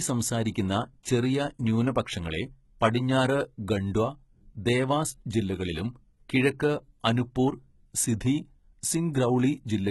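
Speech, with heavy codec damage throughout. Nothing is heard above 11.8 kHz. The treble is rebuilt from copied lower bands, so its harmonics do not match. This is likely HE-AAC compression at a very low bitrate.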